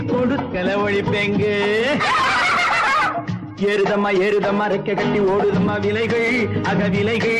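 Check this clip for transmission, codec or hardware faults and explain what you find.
No faults turn up anywhere in this clip.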